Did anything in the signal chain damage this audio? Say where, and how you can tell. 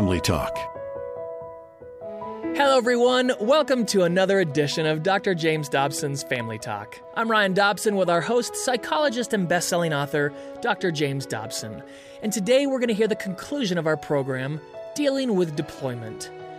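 Yes. Two isolated clicks at 6.36 s and 8.15 s are most likely dropped samples at the driver or buffer stage, where a handful of samples, a fraction of a millisecond's worth, went missing. The waveform jumps abruptly from one value to a later one with nothing removed that the ear could miss, so each event is heard as a single sharp tick. On a spectrogram each shows as a thin vertical line spanning the whole spectrum.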